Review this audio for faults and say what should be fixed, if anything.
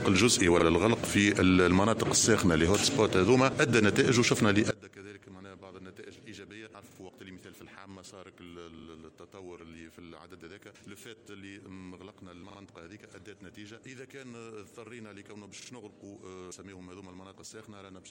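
Repeated buffer at 0.60 s (one extra repeat), and at 6.91, 8.79, 12.50 and 15.62 s (two extra repeats each): the same 43 ms slice, fitting a 2048-sample buffer, replays with hard joins. Exact repetition distinguishes it from a dropout's silence. Larger buffering or higher-priority audio threads would prevent it.

From 4.71 s to the end, the mono level drops about 23 dB and centred content thins almost to nothing, likely from one channel inverted. A uniform steady drop, not gaps, sets it apart. Checking polarity on each channel's wiring or patch would prevent it.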